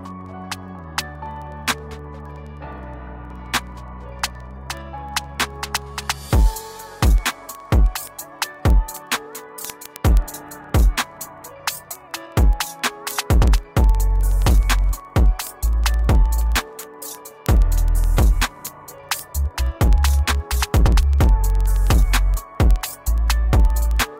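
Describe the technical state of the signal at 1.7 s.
At 1.7 s the signal carries word clock ticks, present from 0.11 s to 24.18 s. The receiving device runs unlocked from the sender, with a clock mismatch of a few hundred parts per million. Each slip drops or repeats one sample, producing ticks roughly every 0.05 s.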